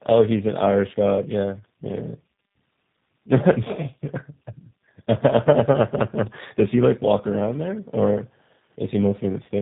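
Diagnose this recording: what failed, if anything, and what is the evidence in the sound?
The failure is at the codec stage: tandem speech coding across the whole clip. The speech has no content above about 3.8 kHz, which fits a narrowband call path, and it carries a compounded roughness and warble. That pattern fits two speech codecs in a row, GSM full rate followed by G.729A, with G.711 A-law in between. The second coder re-encodes the first one's artefacts. A single low-rate codec would sound muffled but less rough and less warbly.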